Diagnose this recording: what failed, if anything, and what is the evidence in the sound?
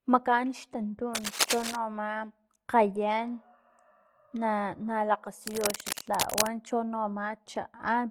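Opus compression, throughout the clip, at the codec stage. The speech has a grainy, rough texture with plainly audible codec damage, and the likely cause is Opus running in its CELT music mode. When bits run short, this coder keeps each band's energy but fills the bands with folded copies of lower ones or with noise. That turns the voice coarse rather than swirly. The band stays fullband, up to about 20.5 kHz, and the degree of damage fits a low rate around 24 kbps.

Cable scratch noise, from 1.15 to 1.76 s and again from 5.45 to 6.47 s, in the analogue wiring. Both are dense, uneven bursts of scratching and rustling laid over the speech. The first is roughly as loud as the speech, and the second sits a little below it. The likely cause is a worn cable or connector being moved, so that its contact resistance jumps rapidly and adds irregular noise to the signal while it is disturbed.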